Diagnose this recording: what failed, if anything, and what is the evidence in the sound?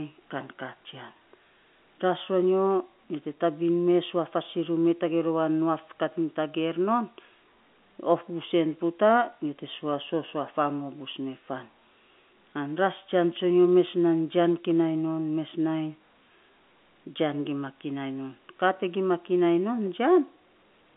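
No fault found in this recording.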